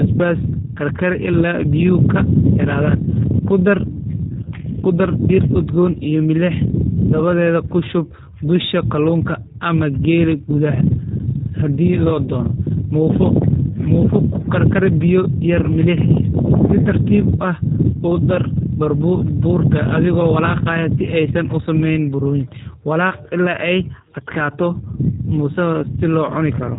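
From start to finish the speech has passed through a G.729 codec, the low-rate VoIP coder whose sound points to about 8 kbit/s. Instead of keeping the waveform, it models each short frame with a vocal tract filter, a pitch predictor and a few sparse pulses, then rebuilds the speech from them. Everything above 3.8 kHz is gone, so the speech sounds narrow and telephone-like, and the resynthesis gives it a plainly audible rough, buzzy, synthetic edge.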